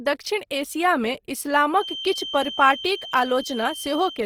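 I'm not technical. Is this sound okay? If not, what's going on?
No, not quite. Throughout, the speech sounds grainy and rough, likely from Opus compression squeezing it into too little data. From 1.69 s to the end, a thin, single-pitched feedback whistle near 3.1 kHz hums quietly under the speech, likely a speaker-to-microphone loop.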